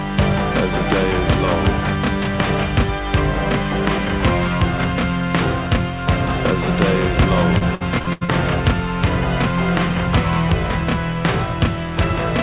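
Repeated packet loss (robotic sound) runs from 7.58 to 8.30 s: six gaps, the longest 81 ms, are patched by extending earlier audio, leaving choppy sound.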